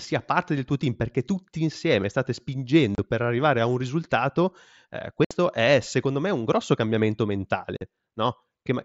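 Unconcealed Bluetooth headset packet loss at 2.95–2.98 s before "per arrivare a un", 5.25–5.31 s between "a un risultato eh" and "è secondo me un", and 7.77–7.81 s after "me un grosso cambiamento": headset voice packets went missing across the mSBC link, leaving abrupt holes of 30, 60 and 45 ms.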